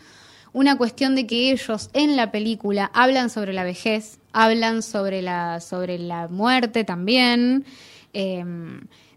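Speech carrying a block size mismatch (truncated) throughout: a steady buzz near 43.1 Hz, which fits 1024-sample blocks at 44.1 kHz, comes from each block losing its tail. Unlike a padded mismatch, no silent gaps break the sound, and it plays at normal speed.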